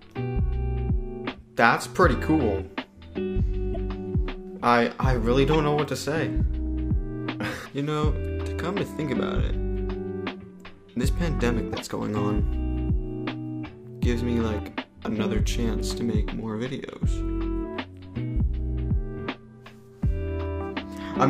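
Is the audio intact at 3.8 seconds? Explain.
No. A corrupt frame was decoded just before that point, from 3.73 to 3.77 s. Flipped bits in about two compressed frames were played anyway. Energy landed at the wrong frequencies. It sounds like a short glitch, a chirp, squeak or blip, peaking around -15 dBFS.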